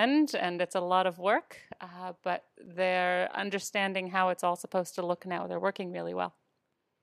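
At 2.66 s, a block of digital silence about 7 ms long replaces the speech with zeros, and the abrupt cut and return land as a sharp tick.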